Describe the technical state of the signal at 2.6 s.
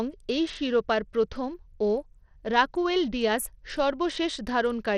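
At 2.6 s the speech carries plainly audible damage that runs through the whole clip. It is likely Bluetooth SBC compression, starved of bits, which fits roughly 80 kbps. The top bands drop out or flicker. Coarse quantisation adds gritty noise and aliasing.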